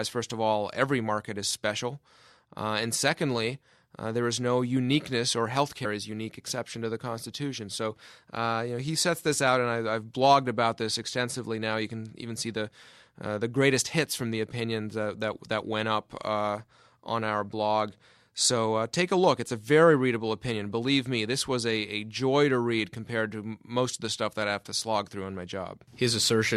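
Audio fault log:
5.84 s, compressed frames skipped: the speech jumps ahead by around 50 ms, which fits two missing frames of 26.1 ms.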